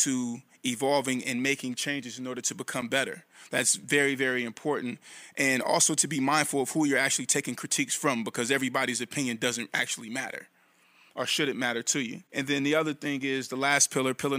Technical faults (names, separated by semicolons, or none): gap between stream segments